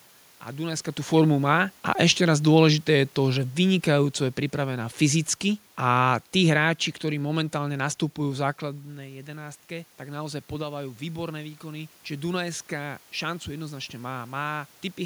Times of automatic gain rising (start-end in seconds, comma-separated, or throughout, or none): 8.64-11.98